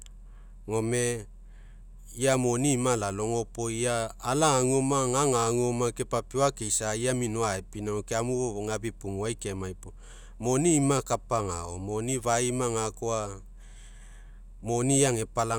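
No technical faults are audible.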